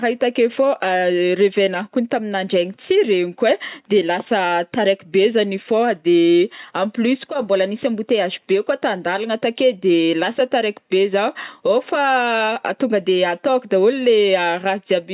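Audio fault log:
No faults found in the speech recording; nothing to log.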